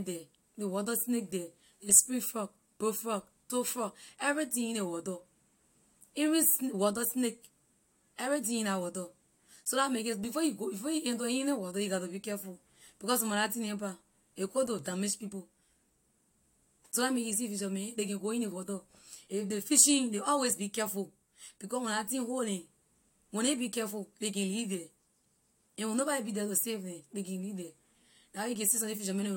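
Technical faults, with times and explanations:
No technical faults are audible in this speech recording.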